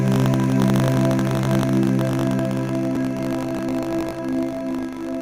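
Throughout, buffer tearing adds a steady 50 Hz robotic buzz. Writer and reader cross inside each period, splicing in a small slice of audio from roughly 70 ms earlier. Unlike a click, it persists wherever there is signal.

At 0.96 s and 2.96 s, an overlap between stream segments trims a sliver of real audio at a segment join, giving a tiny skip. The repeat every 2.0 s marks these as segment boundaries, not tearing.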